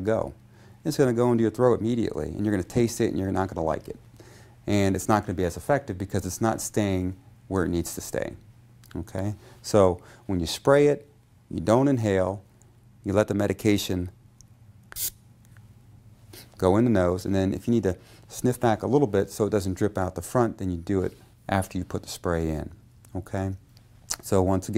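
No technical faults are audible anywhere in this audio.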